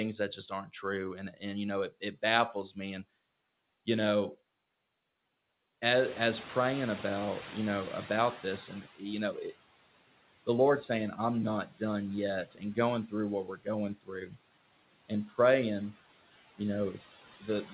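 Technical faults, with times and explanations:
Throughout, noise suppressor artifacts: the suppressor pulls the steady background down by about 18 dB frame by frame, so the noise sinks in the gaps and swells back under the speech.
5.9 to 8.95 s, noise suppressor catching up: the room noise jumps by about 15 dB near 6 s, and the suppressor's noise estimate lags. The louder noise first comes through with less reduction, then fades over about 3 s as the estimate adapts and reaches about 14 dB of cut.
0.37 to 2.77 s, 8.68 to 9.55 s, 11.16 to 11.81 s, 12.51 to 14.37 s, 15.09 to 15.39 s and 16.58 s to the end, speech cut by the noise suppressor: the suppressor mistakes quiet parts of the speech for noise and turns them down with the background, by about 13 to 18 dB at worst. Soft consonants and word endings sound swallowed, briefly in most spans and for a few hundred milliseconds in the first and fourth.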